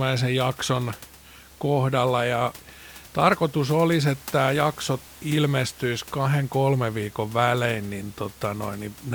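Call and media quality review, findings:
No faults found in this speech clip.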